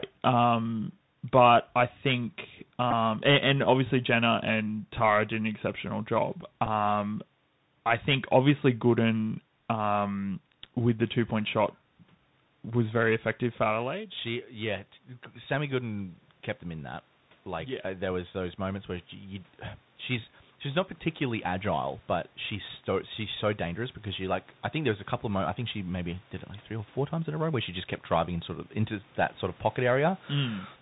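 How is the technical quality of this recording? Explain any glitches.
The recording is degraded. It carries narrowband Bluetooth coding throughout, two brief packet glitches, and a slow gain rise late in the clip.

The Bluetooth CVSD headset codec is present from start to finish, which fits a 64 kbps CVSD link. It codes one bit per sample, up or down, with an adapting step. Nothing above 4 kHz survives. S sounds turn scratchy, loud high sounds distort, and a granular hiss sits underneath. The damage is plainly audible.

A Bluetooth headset packet repeated at 2.91 s, between "but I think" and "and and obviously". About 11 ms of audio was lost, which fits three dropped packets. The chip replayed the last good packet in their place. The result is a short, buzzy tick.

A second packet repeat comes at 6.66 s, just after "did an exceptional job". The gap is about 7.5 ms, which fits two lost packets. 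Again the previous packet's bits were decoded twice. It is heard as a small click.

Automatic gain rising runs from 17.44 s, after "kept them in that", to 29.15 s, before "that sort of". The input level fell by about 16 dB. The gain control compensated by lifting about 10 dB over roughly twelve seconds. Voice and room noise swell together.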